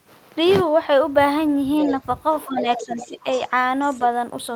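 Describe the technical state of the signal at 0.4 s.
At 0.4 s the speech signal is intact, with no audible technical fault at that moment.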